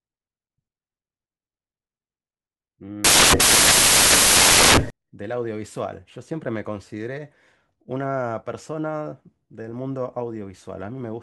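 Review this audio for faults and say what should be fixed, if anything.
Samples built from the wrong bytes, from 3.04 to 4.90 s: for nearly two seconds the speech is replaced by loud, harsh broadband noise. The reader assembled each sample from misaligned or swapped bytes, so the rapidly fluctuating low-order bits landed in the most significant position and became the bulk of every value. Prevention: validate byte order and frame alignment whenever samples are read from a stream or file.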